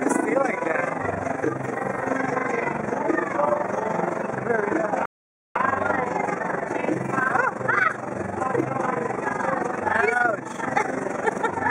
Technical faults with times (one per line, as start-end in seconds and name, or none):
0.00-11.71 overlap-add ripple
5.05-5.55 rebuffering stall